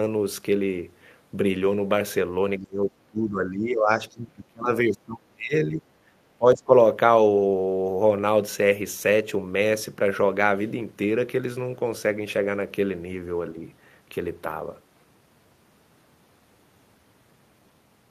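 Speech suppressed in double talk hits this speech recording from 2.59 to 5.83 s, dipping by about 30 dB, and again briefly from 6.38 to 6.73 s. The likely cause is an echo canceller that could not tell the talker from loudspeaker echo while both sides spoke, so it turned both down.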